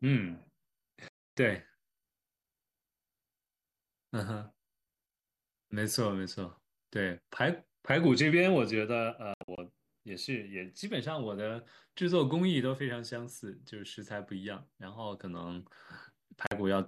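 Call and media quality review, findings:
Digital broadcast dropout, speech muted at 1.08 to 1.38 s. About 288 ms lost, fitting 12 frames of 24 ms. Receiver muting after failed frames.

Second dropout, 9.34 to 9.58 s. Several short holes over 240 ms, longest 72 ms. Roughly 144 ms missing.

Third, 16.47 to 16.52 s. Brief 48 ms cut, consistent with two bad frames. Audio returns later each time. Content sent during holes is gone.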